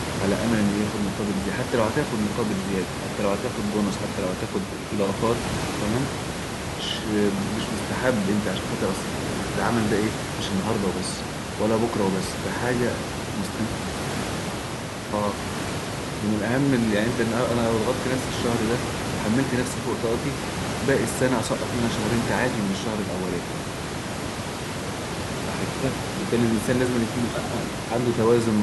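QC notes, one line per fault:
The speech signal shows no technical fault.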